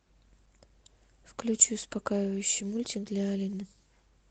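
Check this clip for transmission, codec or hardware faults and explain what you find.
Nothing in the path shows a transmission, codec or hardware fault; the speech runs through Opus voice compression at 24 kb/s in hybrid mode, which keeps it super-wideband with only a light coding texture.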